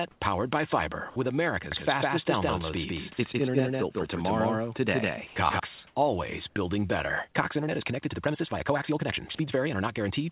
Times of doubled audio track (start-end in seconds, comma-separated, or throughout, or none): 1.72-5.60